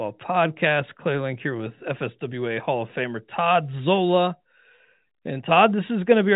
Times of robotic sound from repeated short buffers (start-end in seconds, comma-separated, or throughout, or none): none